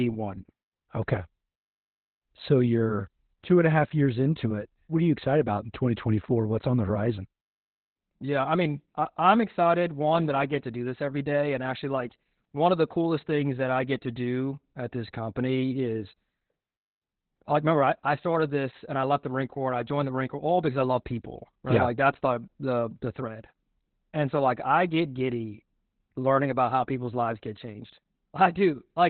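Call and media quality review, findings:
Opus voice compression, whole clip: muffled, hoarse, faintly robotic speech, dead above 4.3 kHz. Sounds like narrowband SILK starved around 8 kbps, coarse excitation coding.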